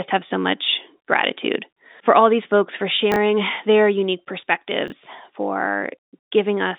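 Two chunks out of order: a 20 ms block of audio arrived one chunk late and played after its neighbour, first at 3.12 to 3.16 s, between "all these folks for" and "their unique", then at 4.88 to 4.92 s. Each leaves a brief jumbled stutter at the hard joins, heard over the band-limited telephone sound.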